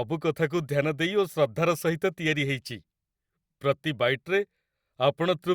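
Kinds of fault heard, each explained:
No technical faults can be heard in the speech. Nothing in the audio points to a problem in how it was captured, processed or played back.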